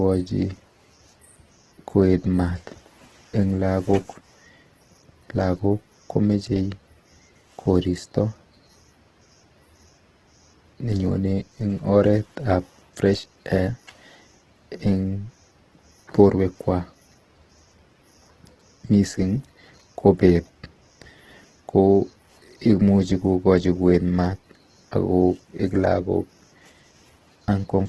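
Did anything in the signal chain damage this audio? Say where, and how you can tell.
Yes, at the codec stage: this has Opus compression all over it, from start to finish. The speech has that grainy, rough texture rather than swirly holes, and there's nothing at all above 12.2 kHz. That's the likely cause: the encoder ran in its CELT music mode, keeping each band's energy but patching starved bands with folded or noise-like content, so detail turns to grit. The damage is heavy, which fits a low bitrate around 12 kbps.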